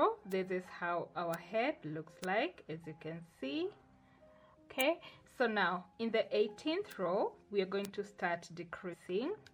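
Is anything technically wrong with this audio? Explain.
Yes, there are two kinds of fault.

Bit error spikes occur at 0.32, 1.34, 2.24, 4.81, 6.92 and 7.85 s. Each is a single sharp, broadband tick. A flipped bit throws one to three samples off by a power of two before they return.

Damaged data in a compressed stream affects 8.90 to 8.94 s. It is a brief disturbance, heard as a chirp, squawk, click or short hole. Corrupted bytes make the decoder misread frames and lose sync until it finds the next header.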